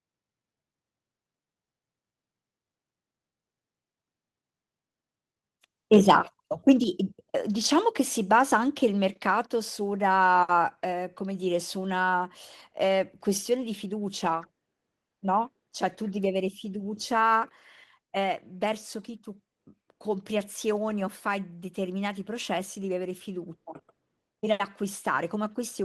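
At about 6.84 s the speech drops in level all at once, voice and background together, by about 6 dB. That's likely the call software stepping the microphone volume down because it judged the input too hot. Through the Opus call path, the top end stops around 12 kHz.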